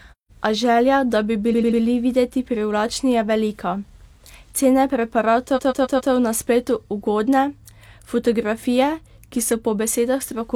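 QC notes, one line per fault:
1.49–1.77 s and 5.53–6.09 s, repeated frames: after "želja da bi" a 93 ms chunk replays three extra times, and before "na spletu" a 139 ms chunk replays four. That fits two or three compressed frames being resent, so you hear a stutter, adding about 0.28 s and 0.56 s.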